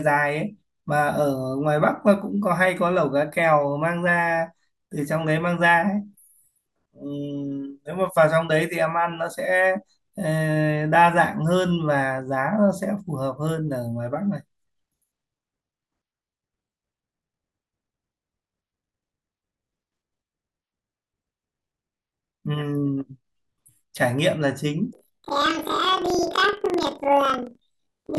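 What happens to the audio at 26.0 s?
At 26.0 s the speech is caught in planar audio read as interleaved, from 24.93 s to the end at 28.19 s. Each block of about 43 ms, which fits a 2048-sample buffer, plays twice at double speed, so the speech sounds an octave high with a 23.4 Hz flutter.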